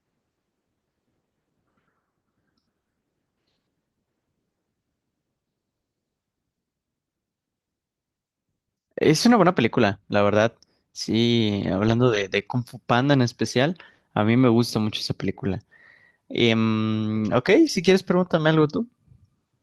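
Nothing in this speech recording stood out as a technical problem on listening.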